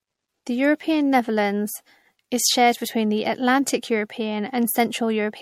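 Throughout the speech there is generation loss: swirling, hollow, smeared tone with blurred attacks and nothing above 16.4 kHz, likely from about three successive MP3 passes around 64 kbit/s. A single encode at that rate would sound cleaner.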